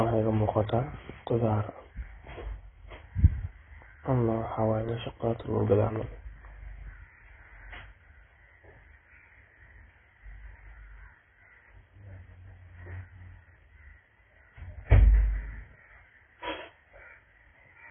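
Throughout, heavy AAC compression at a very low bitrate likely removed everything above 3.8 kHz, leaving the speech dull and smeared.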